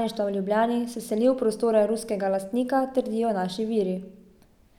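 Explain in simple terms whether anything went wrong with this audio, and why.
Nothing went wrong that a listener would notice: the speech came across as expected, with nothing that stood out as a problem.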